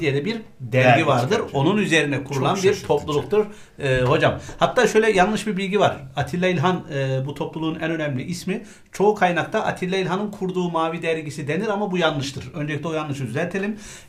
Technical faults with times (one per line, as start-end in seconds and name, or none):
none